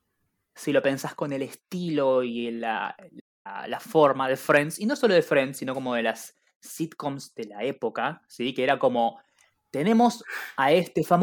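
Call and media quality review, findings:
Playback stall, 3.19–3.47 s: speech cuts out mid-flow for about 250 ms, then resumes. Likely player-side buffer underrun or blocked audio thread, output held silent until data returned. Waveform: flat near-silent gap. Spectrogram: blank vertical band across all frequencies, abrupt edges.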